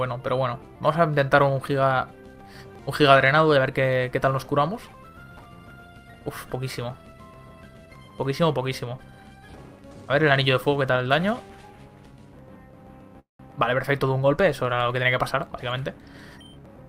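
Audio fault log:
13.19–13.41 s, call audio freeze: The sound stalls for about 0.2 s. The final moment before the stall is stretched into a brief buzzy continuation that decays, and about 140 ms of the gap is silence. Playback then resumes exactly where it stopped, so nothing is skipped, but everything after it runs 199 ms later. The likely cause is packets held up in transit, leaving the jitter buffer empty until they arrived.
15.31–16.83 s, jitter buffer speed-up: Across this 1.5 s stretch the audio plays at 111% of normal speed while the pitch stays unchanged, so it sounds rushed. The receiver is draining an overfilled buffer. It cuts out many tiny slices, each one or a few pitch periods long, back to back, trimming around a fifth of a second in total to win back latency.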